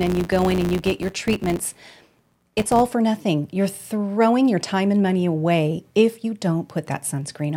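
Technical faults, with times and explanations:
0.00–2.94 s, filter restarted on every block: the filter loses its state at each boundary and restarts from silence, giving a 100 Hz buzz that tracks the speech level and fits 10 ms blocks. Waveform shows evenly spaced spikes; spectrogram shows harmonics 100 Hz apart.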